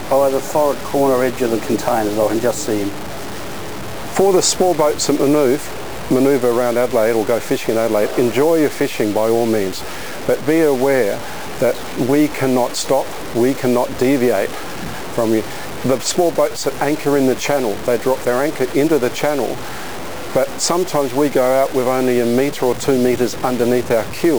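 From start to finish, the audio carries quantization error sitting only around 15 dB below the signal, which points to low bit depth without dither, likely from samples truncated to something like 5 bits. With so few steps and no dither, the error tracks the waveform instead of being spread as neutral noise. Depending on the material it comes through as grainy distortion on quieter passages or as a near-steady hiss, and anything smaller than one step collapses to silence or sputters.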